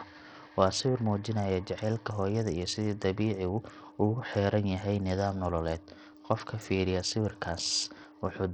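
Throughout the speech, likely Bluetooth SBC compression near 64 kbps starves the top sub-bands of bits, so treble flickers out under gritty noise and aliasing.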